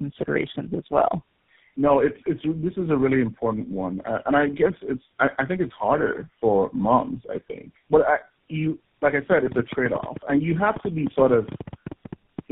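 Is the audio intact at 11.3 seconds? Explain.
No. At 11.3 s two faults overlap. The first is tandem speech coding, present across the whole clip. The sound points to a call carried through about three low-rate speech codecs in series, ending in something like GSM full rate. Each coder re-encodes the previous one's output, so their errors stack. At 11.3 s the speech is rough, muffled and warbly, with nothing audible above 3.7 kHz.

The second is a train of clicks running from 9.32 s to 12.40 s, which spans the queried moment. Short pulses of similar shape arrive at an uneven pace of about 8.8 per second, around 30 in total. They peak about 10 dB above the speech, so they cut through as ticking and popping over both speech and pauses. The likely cause is interference from nearby equipment or a faulty connection or power supply injecting the pulses.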